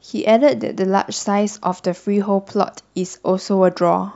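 A faint hiss-like roughness rides on the speech throughout, strongest on loud and bright sounds and gone in pauses. This is sample clock jitter: a converter clock wandering by a few tenths of a microsecond, leaving errors about 55 dB below the signal.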